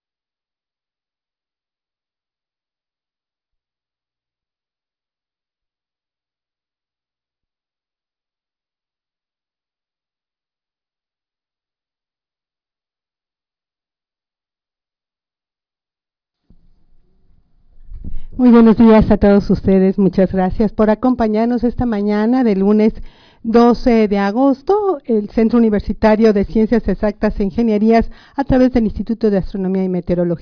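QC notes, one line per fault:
No technical faults can be heard anywhere in the signal.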